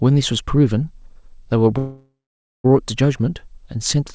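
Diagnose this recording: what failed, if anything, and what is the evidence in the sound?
From 1.78 s to 2.66 s the speech stalls: the last sound is stretched into a fading buzz or hiss that drops to about 0.5 s of silence, and then the talker carries on exactly where they left off, with nothing skipped. That is a call audio freeze at the network and jitter-buffer stage. Packets were likely held up in transit, the buffer ran dry and the receiver filled the 0.86 s wait. The speech now arrives that much later, heard through a band that stops at 8 kHz, as G.722 call audio does.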